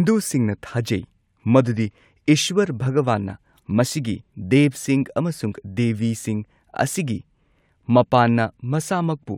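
No technical faults are audible.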